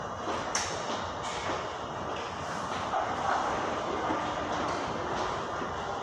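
No technical faults can be heard anywhere in this recording.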